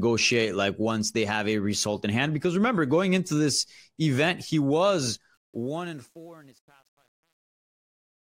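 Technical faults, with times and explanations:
5.34–8.33 s, truncation distortion on a fade: right after "this event he was", the fade-out stage drops low bits without dither, which points to output held to about 9 bits. As the level nears the smallest step, the waveform collapses into a few coarse square steps. From 5.92 s to the end the quiet tail sounds gritty.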